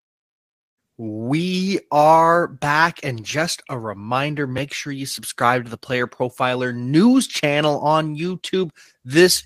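Speech recording with no audible technical faults anywhere in the clip.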